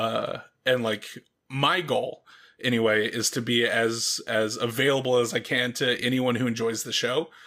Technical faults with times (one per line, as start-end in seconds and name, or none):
none